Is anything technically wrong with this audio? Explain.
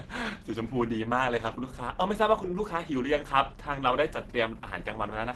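Yes. Throughout the speech there is plainly audible Opus compression damage. The sound is muffled and hoarse, with a grainy, noisy texture instead of clean detail, and the top end stops short of full bandwidth. This is likely the encoder running in its hybrid mode, coding the lower band with its speech layer and the upper band coarsely, at a super-wideband setting. The degree of damage fits a low rate of around 16 kbps.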